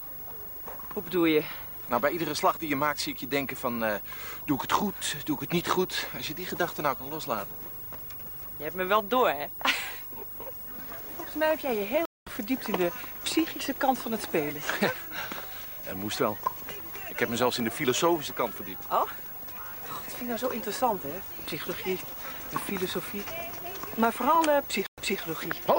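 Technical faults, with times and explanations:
12.05–12.27 s, stream reconnect: the connection dropped, leaving about 210 ms of silence, and a fresh decoder picked up the live stream roughly 0.2 s further on, so a short stretch of sound is skipped.
24.87–25.20 s, stream reconnect: another break brings about 110 ms of silence, then playback resumes 220 ms earlier, replaying a short stretch of sound as the server resends buffered audio.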